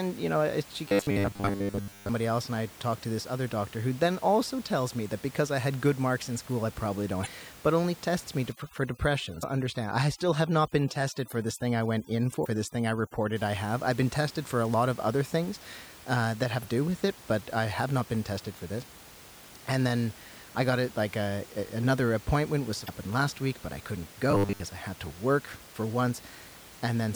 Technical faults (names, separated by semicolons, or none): robotic sound from repeated short buffers; damaged data in a compressed stream; overdone noise removal